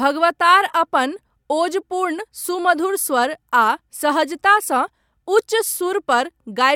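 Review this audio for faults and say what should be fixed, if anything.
No faults; nothing needs fixing.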